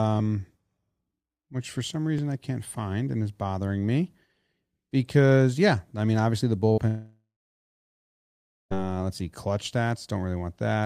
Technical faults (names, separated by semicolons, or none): burst of packet loss; long network dropout